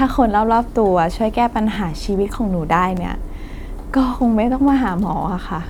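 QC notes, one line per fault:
1.74 to 1.77 s, repeated buffer: a brief buzzy stutter in the speech where an 11.6 ms slice plays three times in a row with hard joins, fitting a 512-sample buffer replayed twice because fresh audio arrived late. Nothing seems to be skipped.
2.97 s, repeated buffer: a single sharp click as the same 11.6 ms slice sounds twice back to back, one extra replay of a 512-sample-sized buffer when new audio missed its deadline. The speech carries on without a gap.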